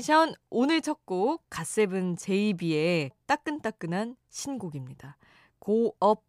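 No technical faults can be heard anywhere in this recording.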